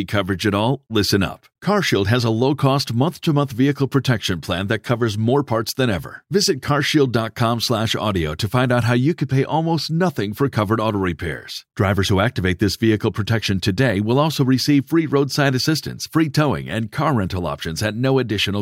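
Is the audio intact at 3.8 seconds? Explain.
Yes, the speech at 3.8 seconds is intact, with no audible fault at that moment.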